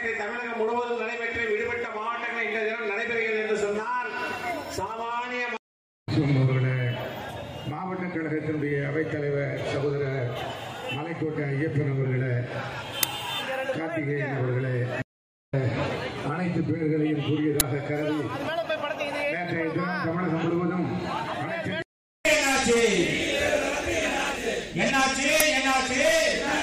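Three short, sharp cracks hit at 13.03, 17.6 and 25.40 s, classic uninitialised buffer symptoms. The playback grabbed blocks before audio was written, playing leftover memory as samples. The cracks last about 5, 10 and 5 ms, matching the size of each unwritten block.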